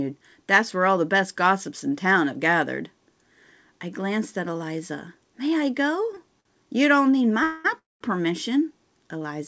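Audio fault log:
6.15 to 6.47 s, short stall from a late packet: two brief holds, at 6.15 s and 6.40 s, where the sound is drawn out for about 15 ms and then 48 ms. In each case a packet missed its playout slot, the jitter buffer emptied, and the receiver stretched the last sound until the data turned up. Playback then resumed from the same point, so nothing is lost. The second hold pushes everything after it about 48 ms later.
7.43 to 8.03 s, call audio freeze: two longer interruptions, at 7.43 to 7.66 s and 7.78 to 8.03 s, likely caused by packets held up in transit until the jitter buffer ran dry. The first is filled for 212 ms with a continuation of the last sound, with no silence. The second runs 221 ms, and 190 ms of it is silent. Playback resumes where it stopped each time, so gaps are added rather than sound removed. The band-limited sound, with nothing above 8 kHz, is consistent with a G.722 call path at 64 kbps.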